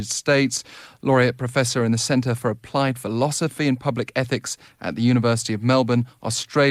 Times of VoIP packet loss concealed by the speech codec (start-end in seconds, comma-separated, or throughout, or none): none